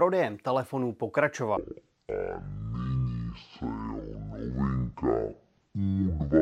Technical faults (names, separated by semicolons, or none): section at the wrong speed